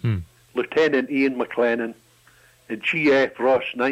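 Nothing stood out as a fault on listening to this recording.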